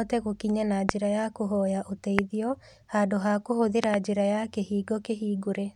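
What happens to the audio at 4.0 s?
A loud pop, in fact two in quick succession, lands between 3.84 and 3.96 s, peaking about 20 dB above the speech, which carries on underneath. A sudden voltage pulse, likely from a plug, switch or static discharge, makes these two tall waveform spikes and two bright vertical broadband streaks on the spectrogram.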